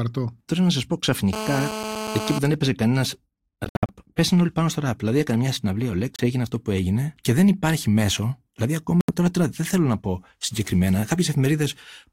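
From 1.33 to 2.39 s a hard, raspy, steady buzz at 217 Hz sits about 7 dB below the speech. This is GSM phone buzz: a nearby phone on a call was pulsing its transmitter, and the audio circuit rectified those pulses.

From 3.65 to 3.91 s, between "δεν έπαιζε κανένα" and "πέσανε όλοι πάνω στο", the sound breaks into several silent holes. They total about 168 ms, and the longest is 61 ms. Another 30 ms gap comes at 6.16 s, between "έκανε μια συναυλία ο" and "έγινε αυτό που έγινε". A 76 ms gap at 9.01 s falls just before "τώρα τώρα δεν θέλω". Each time the speech resumes further on, as though it had kept playing. These holes are likely Bluetooth dropouts, where audio packets reached the headphones too late and were discarded.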